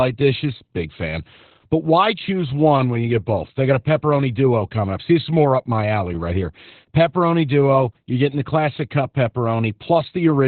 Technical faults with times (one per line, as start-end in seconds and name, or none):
0.00-10.47 Opus voice compression